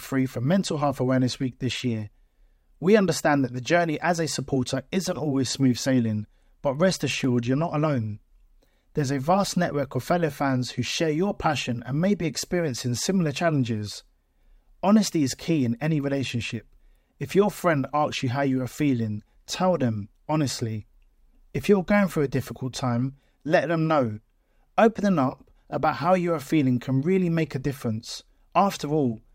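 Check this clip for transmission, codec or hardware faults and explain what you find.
There is one fault. At 7.24 s, between "smooth sailing but rest" and "you're not alone", a tick or dip cuts into the speech. It is a block of digital silence: about 0.73 ms of samples, which fits a 32-sample block, dropped to zero with no fade, so it is heard as a tick or dip.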